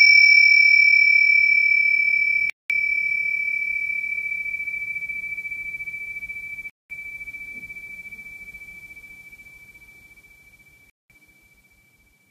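Gaps between chunks occur at 2.50, 6.70 and 10.90 s: the audio arrives in 4-second chunks, and each join leaves 200 ms of silence before playback resumes. Nothing is lost, but the sound stops in short holes at a steady rhythm.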